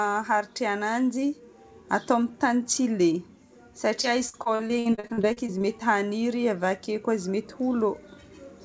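Speech, carried over a call link with nothing above 8 kHz, which fits a wideband codec such as G.722. From 4.02 to 5.62 s there is repeated packet loss, giving a robotic sound. Audio keeps dropping out in short bursts, more than a dozen of them. The longest hole lasts about 60 ms. Each hole is patched by stretching the last bit of sound. That patching covers roughly a quarter of the stretch. The speech turns choppy, with pieces missing.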